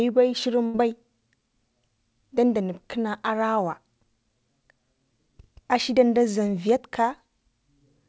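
At about 0.66 s there's a burst of packet loss, lasting until roughly 0.76 s. A run of packets never arrived in time, so the receiver covered the hole by stretching out the last bit of speech it had and fading it down for about 80 ms. When the audio picks back up, about 80 ms of speech has simply gone missing. You hear it as a brief smeared, dying tail and then a small jump forward, sitting within the call's 8 kHz-limited G.722 sound.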